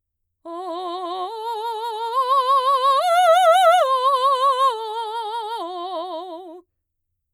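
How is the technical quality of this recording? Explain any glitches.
No glitches or faults are audible in this music.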